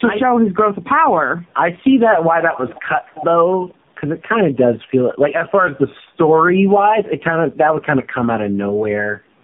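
From start to finish, the speech carries tandem speech coding. It went through two low-rate mobile speech coders, with a telephone-grade link between them. The second coder reworked the first one's damaged output. It sounds rough, muffled and warbly, with nothing above 3.7 kHz.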